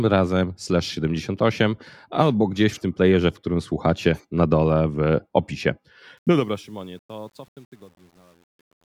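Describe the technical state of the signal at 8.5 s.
At 8.5 s the signal sits in the deepest part of a truncation distortion on the fade-out that runs from 6.18 s to the end at 8.86 s. The gain stage cuts the word length without dither, and the coarse steps fit a 9-bit stage. From 6.72 s on, the falling level nears the smallest step and the waveform turns into a few square steps. The tail sounds gritty instead of thinning out smoothly.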